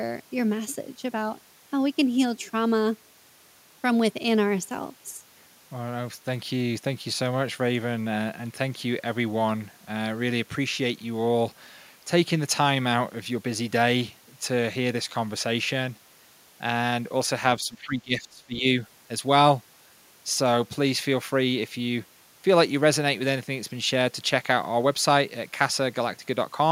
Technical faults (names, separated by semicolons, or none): speech suppressed in double talk